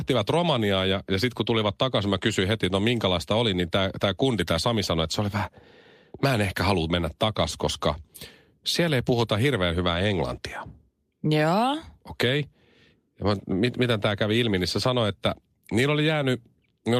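No audible technical faults.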